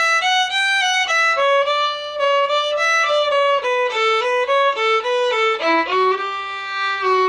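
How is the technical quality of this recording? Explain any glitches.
No audible faults or glitches.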